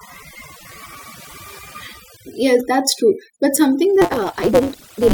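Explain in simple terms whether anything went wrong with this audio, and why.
Overdone noise removal affected the whole recording: a noise reduction tool was set far too strong and cut away any frequency band it mistook for background hiss, including the quieter parts of the speech. The background drops and breaks up into twinkling specks.

From 4.01 s to the end, a block size mismatch (truncated) appears. One stage hands over longer blocks of audio than the next stage reads, so the end of every block is thrown away. That produces a steady 188 Hz buzz, which fits a 256-sample read, and the speech suddenly runs 1.88 times faster while keeping its timbre.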